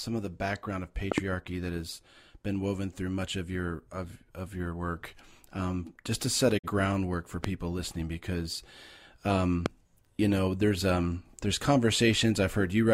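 A voltage spike, likely from a plug, switch or static discharge, lands on the speech at 1.12 to 1.20 s as a loud pop, a double pop about 20 dB above the speech, which keeps running underneath. At 6.57 to 6.68 s, right after "just to set a", a digital broadcast dropout occurs: the receiver mutes on corrupted data, fading out over 20 ms and losing about 43 ms of speech, which fits a single lost frame. Similar single loud pops, each likely a fresh spike, strike at 7.44 to 7.47 s, just before "listening because", and at 9.66 to 9.68 s, just before "you know there's um".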